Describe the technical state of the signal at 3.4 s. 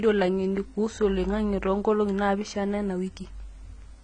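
At 3.4 s you're hearing AAC compression, and it runs through the whole clip. Nothing comes through above about 9.5 kHz, so the speech sounds dull and smeared, with a fizzy, warbly edge on sibilants. That fits a starved bitrate around 24 kbps, likely AAC-LC.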